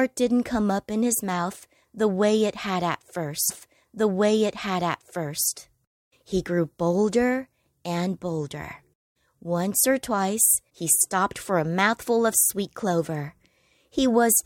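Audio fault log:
3.49–5.48 s, stream segment repeated: right after "way it had at", about 2.0 s of the speech plays a second time, because the same segment was fetched or queued twice. A small blip marks the jump back, seen as a sharp discontinuity in the waveform, and the spectrogram shows the same pattern side by side.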